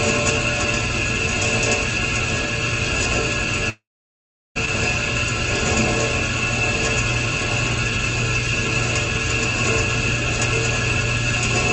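From 3.69 to 4.57 s the sound smears into a brief fading buzz, then about 0.73 s of silence, and it resumes with material skipped, likely a long network dropout rather than a short concealed glitch.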